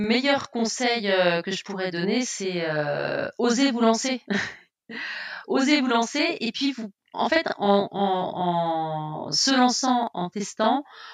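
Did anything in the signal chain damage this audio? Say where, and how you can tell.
Yes: a channel delay (doubling) throughout the speech, from the driver or buffer stage. One channel runs 40 ms late, and the mono sum repeats every onset as an equal-level slap. On a waveform each burst shows a twin 40 ms behind; a spectrogram shows comb-filter striping.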